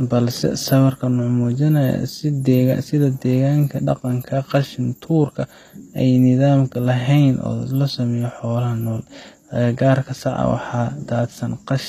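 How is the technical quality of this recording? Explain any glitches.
The speech is degraded by plainly audible codec damage across the whole clip. The upper range sounds synthetic: s sounds come out gritty and lispy, with a metallic sheen, and nothing at all is present above about 14.9 kHz. This is likely HE-AAC compression at a low bitrate, around 24 kbps. The codec keeps only the lower spectrum and fakes the treble by copying lower bands upward, so those harmonics no longer line up with the real ones.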